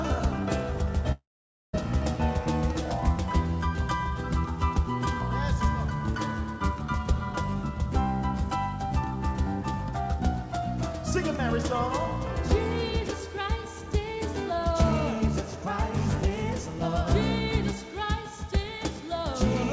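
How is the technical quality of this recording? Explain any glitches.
One glitch stands out, heard through a call path whose G.722 coding leaves nothing above 8 kHz. From 1.12 to 1.75 s there is a long network dropout, likely caused by audio failing to arrive. The receiver stretches the last sound into a fading buzz or hiss, which gives way to about half a second of silence. The audio then resumes with the missing 0.62 s skipped. This gap runs long enough to decay into silence, and the lost stretch is gone rather than delayed.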